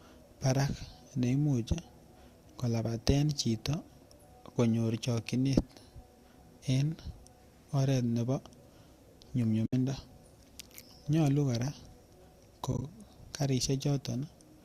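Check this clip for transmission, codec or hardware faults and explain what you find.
Two brief gaps in the speech point to AAC frame loss with muting, heard over the slight roughness that the low-delay AAC coding likely leaves.

From 9.66 to 9.73 s, about 70 ms of sound disappears. This fits roughly seven lost 10 ms frames. From 12.72 to 12.82 s, 50 ms is lost in short scattered runs spread over 100 ms, none much longer than 20 ms, which gives a string of brief dips. In both places the decoder zeroed the missing frames, and the overlapping windows fade the sound out and back in. Because the edges are soft, these are muted frames, not hard sample dropouts or digital clipping.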